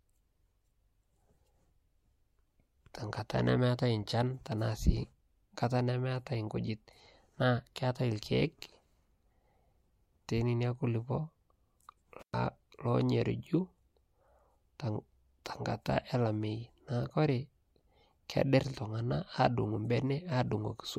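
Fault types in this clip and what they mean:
Intermittent contact: a connection briefly opens around 12.20 to 12.34 s, dropping the sound for about 120 ms with crackle at each edge and faint hiss between.
Pre-echo: at 15.45 s, codec noise smears about 11 ms ahead of a sharp attack, rising about 11 dB, consistent with a long transform block without switching to short ones.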